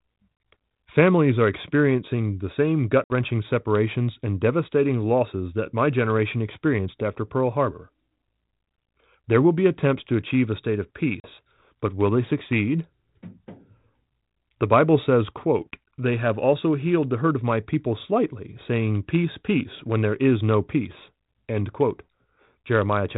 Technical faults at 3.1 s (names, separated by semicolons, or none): packet loss on an ADPCM call